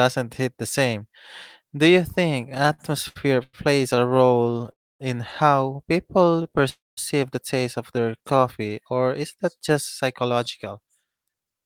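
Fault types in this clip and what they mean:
Repeated stalls (stutter): from 2.49 to 4.69 s the speech keeps halting as late packets leave the jitter buffer empty, 21 short gaps filled with continued sound, the longest 99 ms, about a fifth of that stretch. As with a single freeze, nothing is lost; the speech simply drags and stumbles.
Call audio freeze: at 4.71 to 5.01 s and 6.69 to 6.99 s the sound hangs for about 280 ms, decaying mostly into silence, likely because packets were held up and the buffer ran dry. Playback then resumes where it stopped, just before "the taste of" in the second case, one long gap rather than many short ones.
Jitter buffer slow-down: at 6.18 to 6.62 s, between "in how" and "the taste of", and again at 7.96 to 8.40 s, between "the taste of" and "or is that just", the speech runs at about 87 to 88 percent speed with unchanged pitch. Repeated pitch periods add about 60 to 70 ms, stretching sounds rather than breaking them.
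Jitter buffer speed-up: from 10.13 to 11.62 s the speech runs about 10 percent fast at the same pitch, as the receiver trims short pitch-period pieces, roughly 150 ms in all, to shrink excess buffered delay. It sounds hurried rather than drawn out, the reverse of the slow-down.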